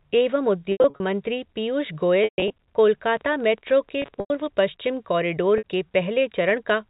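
Packet loss with pitch repetition hits four times. From 0.72 to 1.0 s, about 180 ms goes missing across 280 ms, the longest gap 80 ms, so the receiver keeps looping the last pitch period and you get a held, buzzy smear just before "मंत्री पीयूष". The same happens from 2.24 to 2.55 s, with about 200 ms lost over 320 ms. The 140 ms run there is long enough that the repeated cycle fades toward silence before the sound cross-fades back in.

From 3.16 to 4.47 s there's a train of clicks, around twenty of them at roughly 16.8 per second with uneven spacing. They peak about level with the speech, so they tick over the sound, in pauses too. The likely cause is interference or a faulty connection.

Overlapping that stretch, from 4.02 to 4.30 s, another 180 ms of packets drops over 280 ms, with the longest run 100 ms, and the buzzy hold comes just before "पश्चिम कॅारिडोर के". Finally, at 5.58 to 5.64 s, right after "पश्चिम कॅारिडोर", a 60 ms loss gives a brief held blip. 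All of this sits on G.711 A-law telephone audio at 64 kbps, which keeps everything under 4 kHz.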